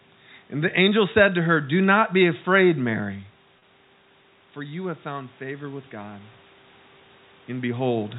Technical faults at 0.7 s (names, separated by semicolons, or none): none